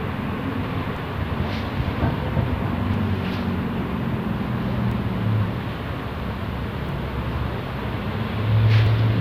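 Short skips break the sound at 0.97, 2.94, 4.92, 6.89 and 8.87 s, each a sudden jump where a sliver of about 30 ms vanishes and the surrounding audio butts together with no gap of silence. Their spacing of roughly 2 s points to audio missing between chunks: the recording was likely handled in 2-second blocks, and a small piece was dropped each time one block closed and the next began.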